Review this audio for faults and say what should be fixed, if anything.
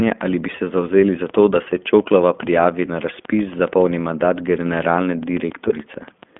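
Throughout the clip the speech sounds thin and boxed-in, with a slightly rough, synthetic edge that is plainly audible. This is the iLBC codec at work. It keeps only a telephone band of about 200 Hz to 3.5 kHz, so sibilance and air are gone. It rebuilds each short frame's excitation independently rather than from the previous one, which causes the grainy texture. The character fits iLBC's 15.2 kbps mode with 20 ms frames. To prevent it, carry the call on a wideband codec such as Opus, or record locally rather than over the narrowband link.

From 5.68 to 5.72 s there is a brief buzzy, held-vowel smear where the speech momentarily freezes on one tone before snapping back. These are lost iLBC frames. About 20 ms of audio went missing in transit, and the decoder covered the hole by repeating the last pitch cycle blended with noise. Recovery is almost immediate because each iLBC frame decodes on its own. 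To prevent it, reduce packet loss on the network path or enable redundancy or forward error correction so a missing frame can be restored.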